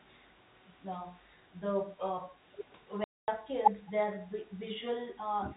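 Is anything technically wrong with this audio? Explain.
Yes, there are two kinds of fault in this telephone-band speech, which passes through G.711 mu-law coding with nothing above 4 kHz.

Packet loss filled with silence occurs from 3.04 to 3.28 s. The receiver inserted silence in place of missing audio, leaving a 240 ms hole with abrupt edges. The gap length fits twelve lost 20 ms packets.

Speech suppressed in double talk appears twice. There is a brief dip of about 10 dB around 3.87 to 3.91 s, and a deeper dip of roughly 15 dB from 5.41 s to the end. The likely cause is an echo canceller turning down the near talker while both sides spoke at once.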